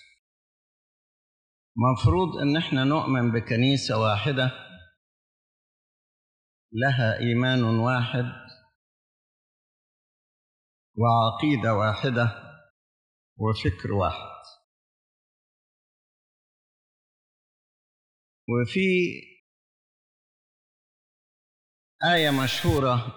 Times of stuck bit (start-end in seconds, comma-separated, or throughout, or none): 22.17-22.78